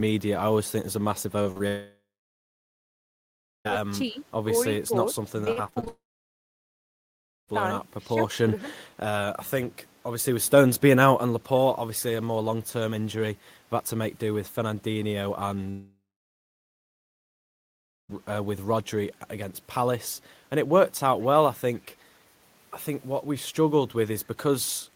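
At 1.43 to 1.47 s, 1.51 to 1.58 s and 1.58 to 1.62 s, short concealed packet loss leaves gaps of 20, 40 and 20 ms. The receiver patched each by extending the preceding sound, heard as small smears or wobbles. A spectrogram shows smoothed, repeated harmonic slices instead of natural variation.

A long network dropout, likely from a stalled connection, runs from 1.68 to 3.67 s. The concealment buzz fades, then about 1.6 s of near-silence follows. Later dropouts, also likely network stalls, run from 5.88 to 7.50 s (about 1.5 s silent) and from 15.70 to 18.15 s (about 2.1 s silent). The waveform flattens almost to a line, and the spectrogram goes blank until the sound resumes.

At 4.10 to 4.17 s the level dips by about 10 dB, and at 8.10 to 8.25 s by about 5 dB. This is speech suppressed in double talk, likely an echo canceller damping the talker while the far side spoke. It shows as brief waveform notches.

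From 5.45 to 5.88 s, repeated packet loss creates a choppy texture. Seven gaps, the longest 40 ms, cover roughly a third of the span. On a spectrogram the harmonics become stair-stepped, frozen blocks, running straight into the second dropout.

At 21.76 to 21.96 s an echo leak, likely from a loudspeaker on one side of the call, returns a faint copy delayed about 0.47 s and about 35 dB down. It appears as a weak ghost of the earlier spectral pattern.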